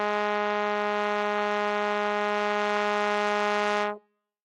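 Nothing in this music stood out as a technical fault on listening.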